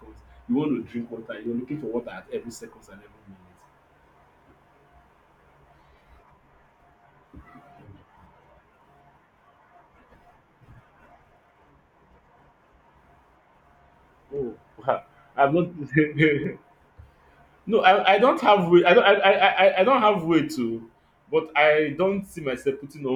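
Three sharp, isolated clicks cut through the speech at 1.46 s, 16.44 s and 18.87 s, each a single tick with no audible gap around it. These are likely dropped samples: only a tiny fraction of a millisecond of audio goes missing, far too little to remove any sound, but the waveform jumps abruptly from one value to a later one. That step shows up as a thin vertical line across the spectrum.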